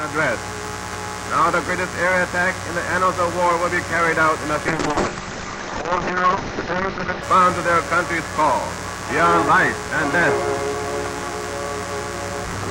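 From 4.69 to 7.29 s, a call bitrate drop starves the encoder. The sound turns coarse and watery, and its top end is cut at 8 kHz instead of 20 kHz, which fits a fall to about 6 kbps. Unlike packet loss, nothing drops out: the sound stays continuous, just degraded.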